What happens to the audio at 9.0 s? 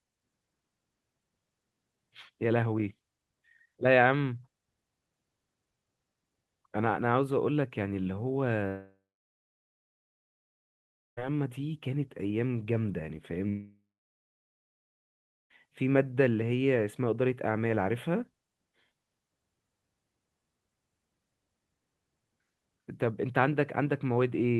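At 9.0 s the audio is inside a long network dropout, most likely packets that stopped arriving for about 2.5 s, from 8.67 to 11.19 s. The receiver fills the gap by stretching the last sound it had into a buzzy, fading tail, which dies away within a few tenths of a second, leaving roughly 2.2 s of silence. The speech then resumes at 11.19 s with the lost stretch simply gone.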